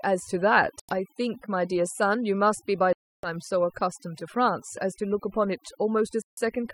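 Right from the start there's overdone noise removal on this speech. The reducer was pushed so hard that it's shutting off frequency bands near its noise estimate, so the background drops and breaks up into twinkly specks, and quieter parts of the voice go with it.

Then come three holes, most likely Bluetooth dropouts, where packets didn't reach the headphones in time and the output went silent. They fall at 0.80 to 0.93 s, 2.93 to 3.29 s and 6.22 to 6.39 s. Each time the sound picks up further along, as if it had kept playing: roughly 90, 300 and 150 ms of the audio seem to be missing.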